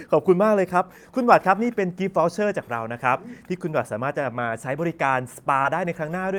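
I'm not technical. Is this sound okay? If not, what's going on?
No. At 5.62 to 5.65 s there's a brief smear in the speech from short concealed packet loss: about 20 ms never arrived, and the receiver patched it in rather than leaving silence.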